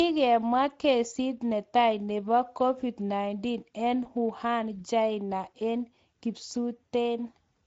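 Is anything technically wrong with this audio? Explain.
Yes. The speech carries two technical faults.

Speex codec damage runs through the whole clip. This CELP codec has too few bits to model the excitation. The speech sounds plainly hoarse, grainy and noisy. The degree of damage points to a middle-quality setting, around 16.8 kbps.

VoIP packet loss concealed by the speech codec occurs from 4.03 to 4.07 s. It fits a single lost 20 ms frame. The decoder filled the gap by repeating its last pitch and filter at falling gain. The result is a brief buzzy or noisy smear, and the speech stays weak or distorted as the decoder recovers.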